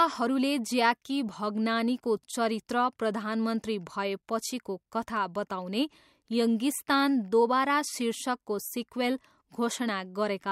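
No audible faults in this speech recording; nothing to flag.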